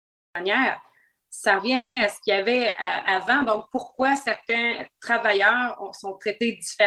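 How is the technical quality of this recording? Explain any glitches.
The recording has four kinds of fault: a clipped opening, a stalled stretch, a sharp quality drop, and two short dropouts.

Cut-off start, at 0.35 s: capture began late, so the first 0.35 s is digital silence and the sound jumps in mid-stream with no natural onset.

Call audio freeze, 1.75 to 1.99 s: packets were likely delayed until the jitter buffer ran dry. The last sound is stretched and fades, with about 130 ms of silence, before playback resumes intact.

Call bitrate drop, from 2.57 s to the end: the bandwidth estimate fell and the encoder went from 48 to 13 kbps, staying lowest for 2.12 s. The sound becomes coarse and muffled.

Burst of packet loss, 2.69 to 2.78 s and 2.81 to 2.90 s: each time, about 60 ms of packets were lost or arrived too late to play. The receiver fills the gap with a fading continuation, then skips ahead past the lost audio.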